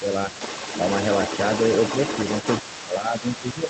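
Speech is suppressed in double talk at the very start, from 0 to 0.06 s. The level dips by about 5 dB for a moment. Both sides were likely talking at once. The echo canceller then turned the talker down with the echo.

The other side's voice leaks through for the whole clip. It sits about 10 dB below the speech, a second voice behind the talker. The echo canceller likely left part of the loudspeaker sound in the microphone signal.

From 2.62 s to the end, the double-talk suppression returns and goes deeper. The talker's voice drops by about 10 dB. Again, the other side likely speaks over it, and both get pulled down.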